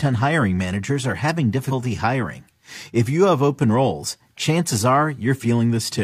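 At 1.68 to 1.73 s, just after "hiring managers are having", compressed frames are skipped: the decoder drops what sounds like about two 46.4 ms frames, so roughly a tenth of a second of speech vanishes.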